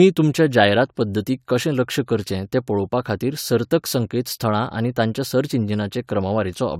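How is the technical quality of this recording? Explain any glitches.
No technical glitches are audible.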